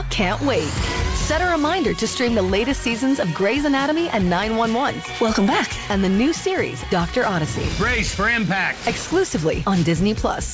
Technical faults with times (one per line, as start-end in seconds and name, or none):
9.08-9.11 sound dropped by the voice detector